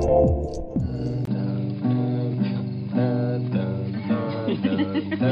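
At 1.25 s the input likely switched to a poorer device, such as another microphone or a headset's call profile. After a 20 ms silence, the sound turns dull and boxy, with nothing above 5 kHz, a faint new background noise and no real change in level.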